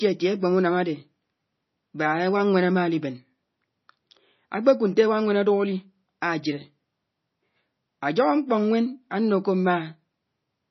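Watery, swirling speech runs through the whole recording, with the s sounds turning into metallic chirps and consonant attacks smearing. Nothing is left above about 5.9 kHz, so everything sounds dull and boxed in. This is likely heavy MP3 compression. Starved of bits, the encoder has cut the treble at a fixed point and dropped weaker frequency lines that flicker in and out between frames. The damage level fits a bitrate around 24 kbps.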